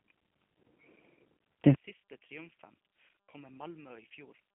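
Speech run through the G.729 codec, likely the G.729A variant, which fits an 8 kbit/s VoIP link. It rebuilds the sound from a filter, pitch predictor and sparse pulses, so the whole clip sounds rough and synthetic, narrowed to a 150 to 3400 Hz telephone band with nothing above 3.7 kHz.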